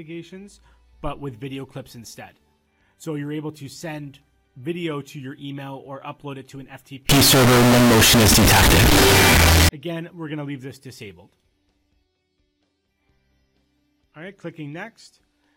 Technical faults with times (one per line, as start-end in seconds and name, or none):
7.09-9.69 float read as integer